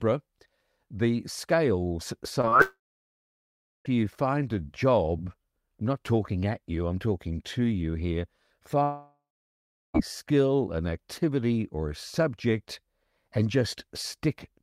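Brief smears in the speech at 2.41 to 2.45 s and again at 2.49 to 2.54 s are short concealed packet loss. About 20 ms of audio failed to arrive each time, and the decoder extended the preceding sound before blending back into the real signal.

From 2.62 to 3.87 s the speech turns into a fading buzz or hiss and then about 1.07 s of silence. From 8.83 to 9.96 s the same happens with about 0.71 s of silence. Each time the speech resumes further on with a stretch missing, the likely cause being a long network dropout.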